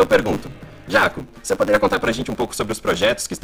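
Block size mismatch (truncated) runs throughout: a steady 100 Hz buzz sits under the audio, which plays about 1.16 times too fast at near-normal pitch. That fits one stage writing 512-sample blocks while the next reads shorter ones, so each block's tail is discarded.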